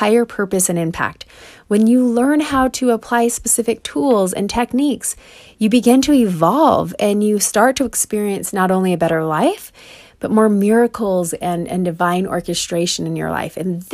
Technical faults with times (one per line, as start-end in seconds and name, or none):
none